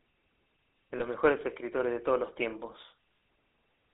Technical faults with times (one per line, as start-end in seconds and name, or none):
0.00-3.93 GSM full-rate codec
0.98-1.01 lost GSM frames